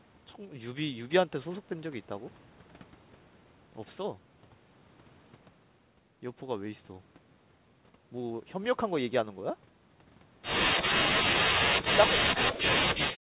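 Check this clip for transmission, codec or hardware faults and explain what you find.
One fault stands out, in the last stretch of the speech. From 11.38 s to the end at 13.23 s, the level collapses in uneven steps, falling by roughly 40 dB at its deepest so that parts of the talker nearly vanish. The likely cause is speech suppressed in double talk. With both sides talking at once, the echo canceller could not tell the near talker from loudspeaker echo and turned everything down. On a waveform the envelope shrinks and breaks into thin fragments. A spectrogram shows the harmonics fading and dropping out in patches. Throughout the clip, nothing appears above 4 kHz, which is consistent with a narrowband G.711 call path.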